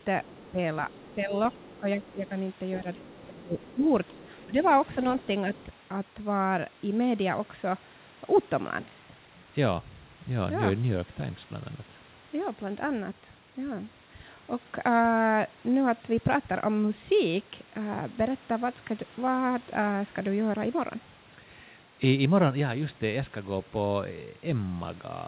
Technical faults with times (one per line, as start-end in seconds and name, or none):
0.00-2.29 other side's voice leaking through
0.26-4.57 speech suppressed in double talk
3.09-4.69 other side's voice leaking through
5.22-5.65 other side's voice leaking through